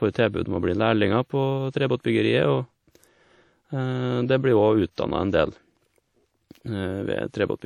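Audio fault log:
Throughout, WMA compression: the speech has a ringing, washy quality with a hiss that swells and fades along with the voice, plainly audible the whole way. That points to a long-block transform codec at a low bitrate, likely around 48 kbps WMA, smearing quantisation noise across tens of milliseconds.
1.05 s, dropped samples: right after "å bli" there's a single sharp click. The waveform jumps straight from one value to a later one, likely because a couple of samples went missing. That's a gap of a tiny fraction of a millisecond, far too short to lose any sound.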